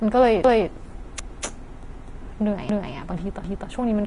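From the start and throughout, the speech sounds hissy and grainy, with a roughened edge on sustained tones and softened consonant attacks. Nothing is present above 10.6 kHz. This is likely Vorbis compression at a low setting, consistent with a bitrate near 33 kbps. The encoder has cut off the top band and quantised the remaining treble so coarsely that fine detail has turned into noise of similar energy, which is where the grain comes from.

At 0.44, 1.19, 1.94, 2.69 and 3.44 s, a quarter-second of sound plays twice. Each time there is a stutter at the join, and the events are spaced evenly, 0.75 s apart. These are overlapping chunks. The audio was handled in 0.5 s pieces, and each piece began 250 ms before the previous one had finished, so the overlapping stretch is heard again at every boundary.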